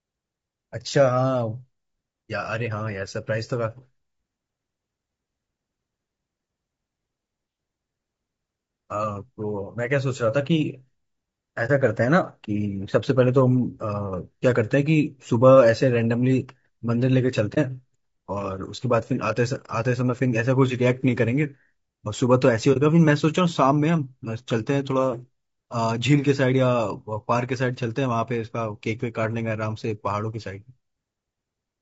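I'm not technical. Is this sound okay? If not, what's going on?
No. Low-delay AAC compression runs through the whole clip. The voice sounds rough and grainy, with hiss between the tones and a dull or artificial top end. The likely cause is the kind of compression used for video calls. It works on very short slices of sound so it can respond quickly, but short slices capture a voice's natural tones poorly. When the data allowance is tight, that detail gets blurred into noise.

AAC frame loss with muting occurs at 11.66, 17.54 and 22.73 seconds. Each time, about 30 milliseconds of sound briefly drops out. One packet of audio never arrived, so the player filled that slot with silence. It fades the sound down and back up around the gap, so you hear a brief dip.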